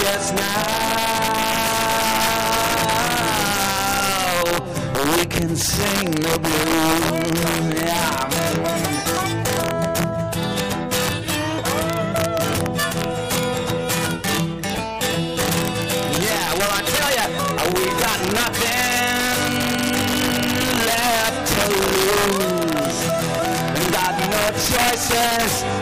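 Integer overflow runs through the whole clip. The level was pushed about 3 dB past full scale, and instead of being held at the limit, every peak that went over wrapped around to the opposite sign. Only a small share of samples, somewhere around one or two percent, actually cross the line. So you get sudden, violent cracks on the loudest moments, far harsher and snappier than ordinary clipping, while quieter stretches pass untouched.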